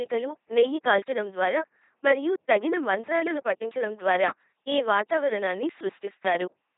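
From start to end, the speech passes through an LPC-10 vocoder at 2.4 kbit/s, rebuilt as buzz or hiss through a simple filter. It sounds robotic and mechanical, with nothing above 3.8 kHz.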